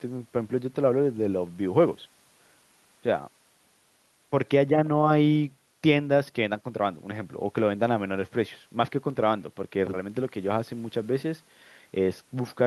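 No technical faults can be heard anywhere in this speech, which comes through an Opus call connection.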